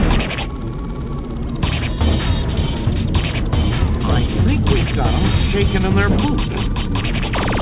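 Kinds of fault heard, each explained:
No fault is audible; the audio comes through a call path whose band stops at 4 kHz, which fits a narrowband G.711 mu-law connection.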